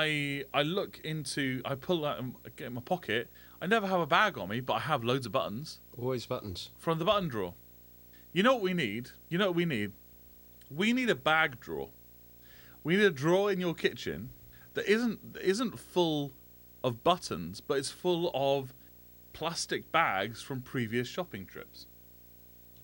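From start to finish there's a video or display buzz under the speech. A screen or video cable is coupling into the audio path, so you get a low buzz locked to the 59.94 Hz field rate with a gritty hash riding above it, plus a thin, piercing line-rate whine up at 15.7 kHz. It all sits roughly 25 dB below the speech.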